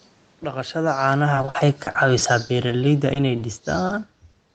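From 0.76 s to 4.07 s the level sinks steadily under automatic gain falling. The gain control judged the input too loud, or its background noise too strong, and backed its gain off by about 8 dB, so the speech and the room noise beneath it drop together. On a waveform the envelope tapers gradually across those three seconds. On a spectrogram the whole picture, including the noise floor between phrases, fades evenly in brightness with no change in spectral shape.

Between 1.35 s and 2.72 s comes repeated packet loss with the robotic sound it brings. Ten gaps, the longest about 50 ms, fall close together. Each is patched by extending the preceding sound, and concealment fills about 16% of that stretch while about 200 ms of real audio is lost. The speech turns choppy. A spectrogram shows repeated short blocks of smeared, overly regular harmonics, and the waveform shows copied cycles where detail should be.

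Overlapping the end of that stretch, from 2.53 s to 2.90 s, the jitter buffer slow-down stretches the audio to 89% speed, adding about 47 ms. Single pitch periods were repeated to rebuild the buffer's reserve, so sounds drag while the pitch holds. On a spectrogram the harmonics keep their spacing but run longer. The waveform shows near-identical periods repeated back to back.

Short concealed packet loss then strikes three times, at 3.13–3.17 s, 3.87–3.91 s and 4.31–4.35 s. Each time about 20 ms never arrived and was filled by continuing the last sound before blending back in. Each is a brief smear or wobble. A spectrogram shows a sliver where harmonics or noise freeze for a moment. On the waveform a short repeated segment sits at each spot, blending into the real audio at the rejoin.

At the very end, from 4.51 s, a short stall from a late packet holds the last sound for about 20 ms until the data arrived, with nothing skipped. 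It comes across as a slightly prolonged tail with a slight buzz or dip. A spectrogram shows a frozen frame, and the waveform a repeated cycle. The band stops near 8 kHz, as expected for this call path.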